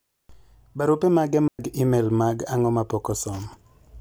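At 1.48 s a digital wireless dropout mutes the speech for about 110 ms, leaving a clean hole with no noise burst. The waveform flatlines and the spectrogram shows a blank vertical gap.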